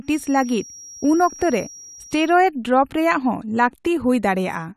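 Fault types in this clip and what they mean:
feedback whistle: a thin, slowly swelling and fading 5.7 kHz tone sits well below the speech for the first 2.4 s, likely from a loudspeaker-to-microphone loop held just short of runaway.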